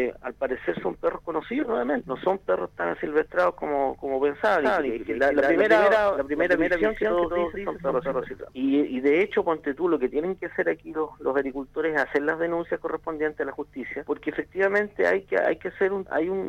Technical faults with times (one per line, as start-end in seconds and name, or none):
4.60-8.44 doubled audio track